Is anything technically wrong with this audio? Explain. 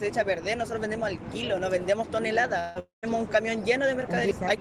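Yes. From 2.59 to 2.78 s the sound smears into a fading buzz or hiss, and after a brief return at 2.79 s it smears again until 3.06 s, this time decaying to silence for about 150 ms before the audio resumes. This is likely a long network dropout. Packets stopped arriving, so the receiver stretched the last sound to cover the gap, and about 160 ms and then 240 ms of the original audio were lost entirely.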